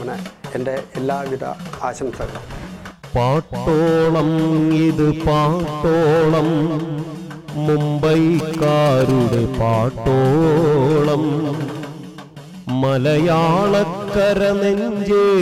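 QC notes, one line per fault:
8.39–9.35 s, GSM signalling bursts: a galloping run of ticks and short buzzes at about 217 Hz, sitting around 10 dB under the sound. A nearby 2G phone was signalling, and the audio circuit rectified its radio bursts into that audible pattern.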